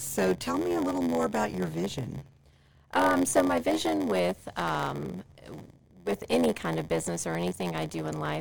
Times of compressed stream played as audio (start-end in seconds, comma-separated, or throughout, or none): none